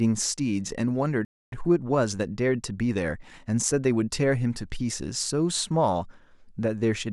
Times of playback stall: 1.25-1.52

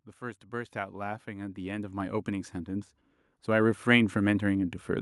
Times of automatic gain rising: 0.05-4.81

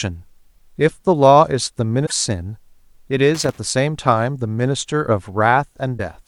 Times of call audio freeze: none

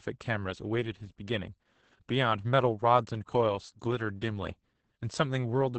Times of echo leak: none

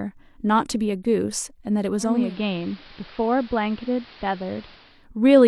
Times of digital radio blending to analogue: 1.97-5.08

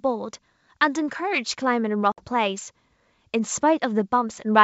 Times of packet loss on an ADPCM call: 2.12-2.27

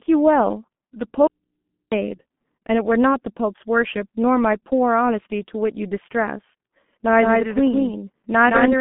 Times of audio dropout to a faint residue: 1.27-1.92

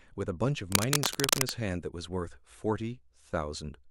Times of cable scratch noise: 0.72-1.50

